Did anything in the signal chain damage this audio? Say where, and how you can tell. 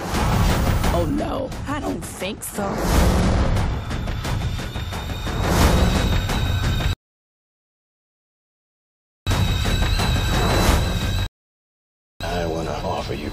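Yes. There are rebuffering stalls at 6.93 to 9.27 s and 11.26 to 12.21 s, in the playback stage, where the player's buffer meets the network. The sound drops to silence and then picks up exactly where it stopped, with no content skipped. That tells you the player ran dry of downloaded audio and waited for more to arrive, adding about 2.34 s and then about 0.94 s of dead time rather than losing anything.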